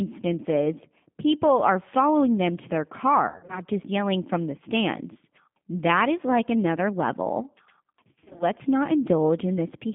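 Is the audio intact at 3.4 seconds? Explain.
No. Between 3.27 and 3.61 s, after "following them to their" and before "just yelling from the", VoIP packet loss concealed by the speech codec occurs: packets carrying 160 ms of speech went missing, scattered across 220 ms with the longest gap 60 ms. The decoder filled each hole by extending its last pitch and vocal tract filter at falling gain, so the speech smears into a fading buzzy tone or coloured noise and stays weak and distorted until the frames rebuild.

Underneath, the whole line runs through the G.729 codec at 8 kbit/s. It models speech as a filter, a pitch predictor and a few pulses per frame and keeps only about 150 Hz to 3.5 kHz, so the sound here is narrow, rough and audibly synthetic.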